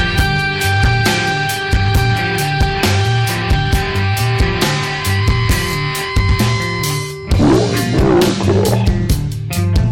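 A harsh, fuzzy edge sits on every loud moment from start to finish. This is hard clipping: the signal is driven about 13 dB past what a stage can pass, so a small share of samples have their peaks sliced flat, spraying high harmonics.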